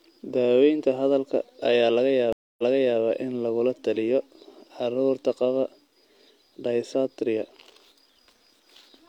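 Speech with a stream reconnect between 2.33 and 3.00 s: the audio stops dead for about 258 ms, then picks up 418 ms earlier than where it left off, so a short stretch is heard twice. That rewind marks a broken connection, with the server resending recent audio into a freshly started decoder. A plain dropout or packet loss would leave a gap and carry on from the same point, never replaying what came before.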